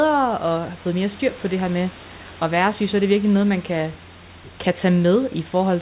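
The speech comes through a narrowband call path, with nothing above 4 kHz as fits G.711 mu-law, and with room noise sitting about 23 dB below the speech.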